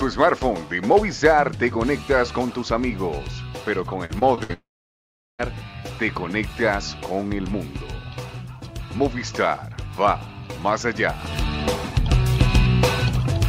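Brief crackling fuzz sits on the loud peaks at 0.22 to 0.33 s and again, for longer, at 0.92 to 1.41 s. This is hard clipping: the signal ran about 3 dB past what a stage could pass, so its peaks were sliced flat, adding harsh high harmonics.

From 4.05 to 4.51 s the sound turns choppy, with short pieces dropping out. This is repeated packet loss, which gives a robotic sound. Audio went missing again and again, in holes up to about 61 ms long. Each hole was patched by stretching the preceding sound, and roughly a third of the stretch is patched filler.

Straight after, from 4.53 to 5.41 s, the last sound smears into a fading buzz and then about 0.76 s of silence. The audio resumes with that portion gone. A long network dropout is the likely cause: nothing arrived, and the receiver could only extend and then mute.

A final short burst of crackle at 10.06 to 10.11 s is hard clipping once more, this time overdriven by only about 1 dB, so the flattened peaks are milder and briefer.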